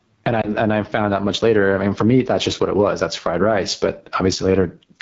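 Across the whole clip, the gain swings by around 10 dB, pulling down under each loud syllable. That is gain pumping, likely from gain set far too high feeding a fast limiter, unlike steady compression, which doesn't breathe. The speech is also rough and raspy throughout, with noise-like hiss above 6.4 kHz: the AMR wideband (HD Voice) codec running at a low rate, which fits 8.85 kbit/s. The damage is in the voice model itself rather than in swirly, watery artefacts. Between 0.41 and 0.50 s, right after "and I", a brief warbling dip marks a lost AMR speech frame, consistent with a single frame. The decoder repeats the last settings at falling gain, so the sound wobbles rather than clicking or dropping to silence, before "and I found out" resumes.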